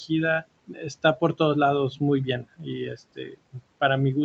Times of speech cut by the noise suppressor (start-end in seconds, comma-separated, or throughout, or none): 0.67-1.40, 2.43-2.68, 3.16-3.61